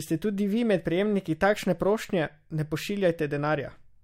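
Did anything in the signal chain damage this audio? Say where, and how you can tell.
No, nothing in the signal chain stood out as damaging this speech on listening.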